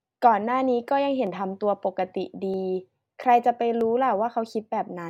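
Speech, with a regular click cutting into it from 1.27 s onward, repeating every 1.28 s right up to the end, about four times in all. That steady spacing is the giveaway for clock drift buffer slips. Two devices are likely running on separate clocks that disagree by a few hundred ppm, so the buffer between them creeps toward empty or full until a tiny chunk, something like fifteen samples, gets dropped or repeated. Each jump is heard as a tick.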